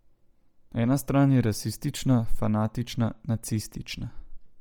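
Throughout, likely Bluetooth LC3 compression, consistent with 32 kbps, swaps upper-band detail for noise, giving the speech a heavily grainy, breathy edge.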